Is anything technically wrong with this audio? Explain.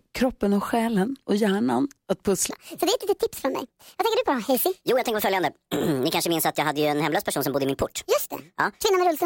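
Yes, there's a section at the wrong speed. From 2.50 s, right after "själen och hjärnan att", through to the end, the speech runs about 1.48 times too fast. Because speed and pitch move together here, the voice jumps up roughly seven semitones and sounds rushed and chipmunk-like for the rest of the clip. That points to this stretch likely being played back or resampled against the wrong clock.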